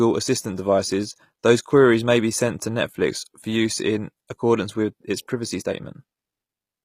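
From start to finish the speech carries HE-AAC compression, likely at around 24 kbps: nothing above 15.5 kHz, with treble rebuilt from copied lower bands, so s sounds turn gritty and lispy.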